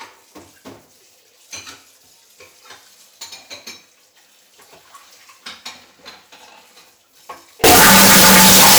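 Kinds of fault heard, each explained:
Signed and unsigned mixed up: From 7.64 s to the end at 8.79 s, the sound turns into a harsh, very loud roar of distortion, with quiet moments blasting as loudly as everything else. The likely cause is 16-bit samples being read with the wrong sign convention, which flips the top bit, so every crossing of zero becomes a leap from one extreme of the range to the other.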